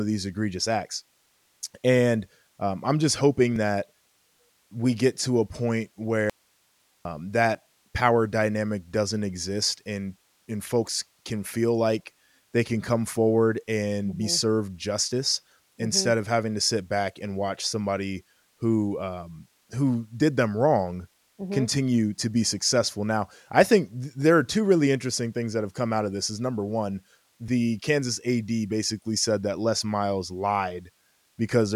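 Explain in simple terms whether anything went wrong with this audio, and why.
Two things go wrong in this speech. The first is a skip at 3.56 s. It is audio missing between chunks. A tiny sliver of sound, far less than a blink, simply vanishes. The two sides are butted together with no silence in between, so the speech jumps forward slightly. The likely cause is a recorder that saves sound in blocks of about 4 seconds and drops a little each time it starts a new block.

The second is an audio dropout to a faint residue, from 6.30 s to 7.05 s. For about three quarters of a second the speech cuts out suddenly. What remains is only a quiet hiss, much softer than the speech. Then the speech snaps back just as abruptly. It does not sound like a natural pause or a fade. The likely cause is the signal being lost for a moment while the rest of the recording chain kept running and picked up only its own background noise.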